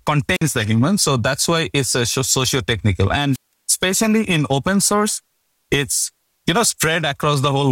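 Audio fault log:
0.33–0.42 s and 3.32–3.53 s, wireless microphone squelch dropout: the radio link fades, a brief burst of hiss rises, then the receiver's squelch mutes the output for about 51 ms and 171 ms respectively, before speech returns with "the human" and "especially in open source".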